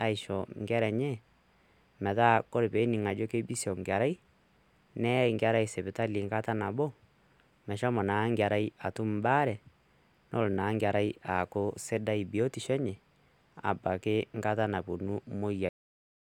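At 15.69 s, just after "abaki nkata naapuonu", the speech has a cut-off end. The sound stops mid-utterance with no natural decay. The last stretch of audio was never written out or played, so the final buffers are simply missing. What remains is flat digital silence from 15.69 s until the clip ends. The drop is abrupt, like a switch being thrown, rather than a word finishing and fading away.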